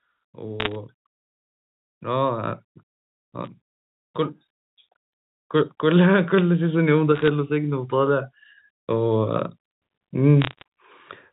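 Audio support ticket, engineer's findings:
Bit errors on a digital phone line: crackle bursts at 0.60–0.75 s, 3.45–3.47 s, 7.15–7.28 s and 10.42–10.62 s. Rate roughly under one percent. Probable component: line or transmission link ahead of the G.711 decoder. Each flipped bit corrupts one sample, and sign or high-order hits jump far off the waveform. Waveform: isolated single-sample spikes over intact speech. Spectrogram: thin vertical broadband lines filling the band up to the 4 kHz ceiling.

Automatic gain rising: level swell from 5.8 to 8.35 s, about 8 dB total. Probable component: AGC stage reacting to quiet input and ramping gain up over roughly 2.5 s. Speech and noise floor lift together. Waveform: envelope widening steadily across the span. Spectrogram: whole band, floor included, brightening gradually, with no edge at any one time.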